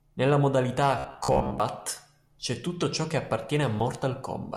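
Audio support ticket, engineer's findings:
Robotic sound from repeated short buffers, 0.98–1.60 s: speech turns to a rigid metallic buzz near 66.7 Hz. Likely cause is late input delivery, with playback looping the last 15 ms fragment. Roughly half the audio in this span is repeats, the real material skipped.

Block of digital silence, 1.80 s: 2 ms dropout just before "c'è tutto ciò che", hard cut to silence, heard as a tick. Second block at 3.80 s, 5.33 ms, heard as a tick or dip, consistent with a 256-sample output buffer left unfilled at 48 kHz.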